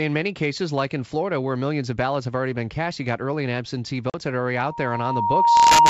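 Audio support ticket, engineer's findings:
Packet loss on the ADPCM call, 4.10–4.15 s: about 40 ms, roughly two packets, dropped to silence. The decoder's predictor loses sync, so speech returns after the hard gap slightly distorted.

Loudspeaker feedback squeal, 4.55 s to end: the mic-to-speaker loop exceeds unity gain at 936 Hz. The tone swells over roughly a second to about 15 dB above the speech on the G.722 wideband path.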